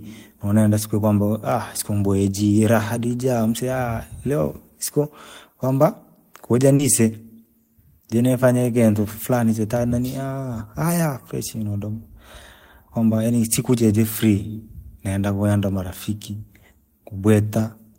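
At about 6.75 s there's a short concealed packet loss: roughly 40 ms of the call didn't reach the decoder in time, so the receiver patched the gap by carrying the previous sound forward, pitch-tracked where it was voiced and as shaped noise where it wasn't, then faded back into the real audio by 6.82 s. You hear it as a quick smear or wobble in the speech right there.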